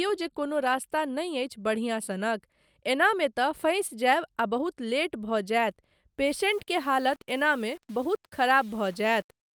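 From 6.27 s to the end of the clip, the speech turns grainy, with distortion that tracks the signal and quantisation noise around 30 dB below it. This is low bit depth without dither, likely from rounding to about 7 bits with no dither added.

At 6.62 s, a sharp attack is preceded by a 55 ms burst of hiss running up to 6.68 s and sounds smeared. This is pre-echo: the codec spread quantisation noise sized for the loud attack across its block, filling the quiet gap before it.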